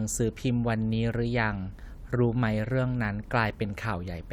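A listener hears a speech recording with no technical faults at any point in the signal.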